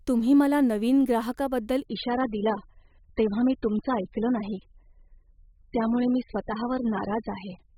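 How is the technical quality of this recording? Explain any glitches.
The recording has one clear fault: an adaptive stream dropping to a lower bitrate from 1.85 s to the end. The connection seems to have slowed, so the player switched mid-playback to a much leaner encoding, which fits a drop from roughly 96 kbit/s AAC to around 8 kbit/s. The change is abrupt but seamless. The speech continues without a gap, but everything above 5.1 kHz vanishes, leaving it dull and muffled, with smeared coding artefacts for the rest of the clip.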